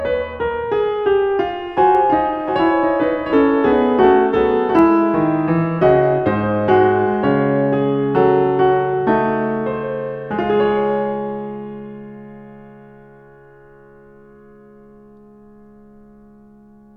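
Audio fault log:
1.95–4.79 s, doubled audio track: the music gets a second full-band copy trailing roughly 0.7 s behind and about 5 dB quieter, dry with no room tail, switching in and out abruptly. Likely a slower second capture path or an edit leaving two offset copies.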